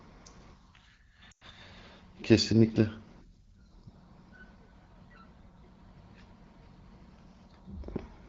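Lost AMR speech frames from 1.31 to 1.44 s: a burst of radio errors corrupted the coded speech over roughly 100 ms, which fits about five consecutive 20 ms frames failing their checksums. The decoder filled the gap by repeating the last good pitch and vocal tract settings at a falling level. The sound smears and thins, then drops quickly toward silence, as wideband concealment does. It returns weak or rough for a moment. Outside the gap the AMR-WB coding stays clear.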